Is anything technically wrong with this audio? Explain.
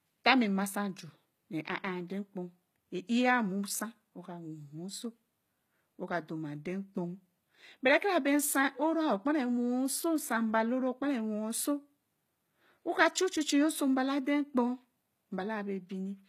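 Yes. Throughout the speech, the treble is likely rebuilt by HE-AAC compression at a rate that fits about 20 kbps. Lower bands are copied upward under a coarse envelope, so harmonics misalign, s sounds turn gritty and metallic, and nothing remains above 14.9 kHz.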